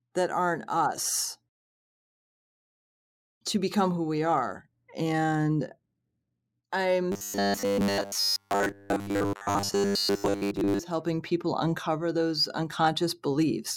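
From 7.12 to 10.79 s the speech turns into robotic sound from repeated short buffers: a stiff, metallic buzz at 100 Hz. It's likely that fresh audio kept arriving late, so roughly 10 ms chunks got replayed for most of that stretch while real audio was skipped.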